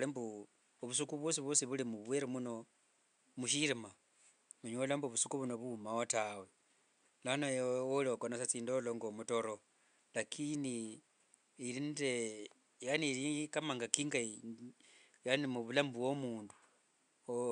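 The speech recording shows no technical faults; the only other sound is the room's background noise, sitting about 45 dB below the speech.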